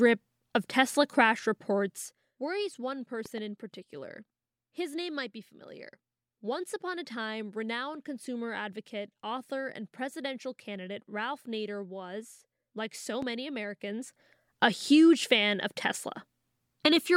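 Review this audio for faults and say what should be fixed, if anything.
Zipper noise: the gain control is being applied in coarse steps, about 100 per second, with no smoothing. Each step leaves a tiny click, so the sound ticks and zips. This happens from 1.81 to 2.32 s as the level falls by roughly 10 dB just before "worries one", and from 13.70 to 14.37 s as it rises by roughly 10 dB. Interpolate gain changes per sample, or ramp them across each buffer.

Loud pop: a sudden electrical transient, likely from a plug, switch, static discharge or driver glitch, is added to the signal. From 3.26 to 3.40 s, between "worries one" and "in particular", two pops land about 5 dB above the sound. A single pop at 13.22 to 13.25 s, after "was like so", peaks about 10 dB above it. Secure cabling, ground the setup and avoid switching during recording.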